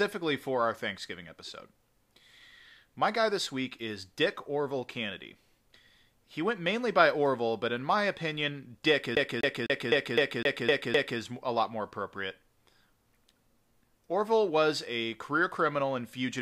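CD stuck on one turn from 9.15 to 11.19 s: a scratch keeps throwing the laser back, so a 255 ms slice of speech repeats eight times, each with a brief mute, before "a lot more appropriate".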